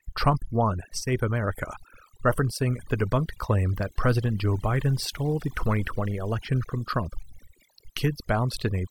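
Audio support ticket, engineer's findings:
Overdone noise removal, throughout. Background drops, breaking up into twinkling specks. Noise reduction stage set too aggressive: bands near the noise estimate pulled down or dropped, taking quiet speech detail with them.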